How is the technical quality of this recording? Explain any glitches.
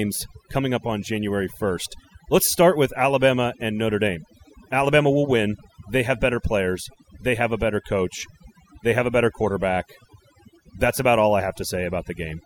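The recording is marred by one persistent fault. Overdone noise removal runs throughout: an over-aggressive reducer mutes bands near its noise estimate, leaving twinkling specks and a lowered, broken-up background, unlike gating's whole-signal pumping.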